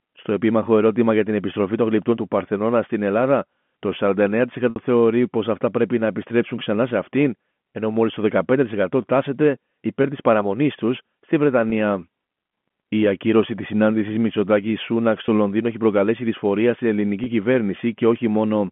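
Packet loss with pitch repetition at 4.70 s, just before "θεωρεί πω αυτά πρέπει": a 60 ms gap, which fits three 20 ms packets, is bridged by repeating the last pitch period, giving a brief held buzz. Single 20 ms repeats follow at 6.64, 10.02, 11.70, 15.26 and 17.24 s.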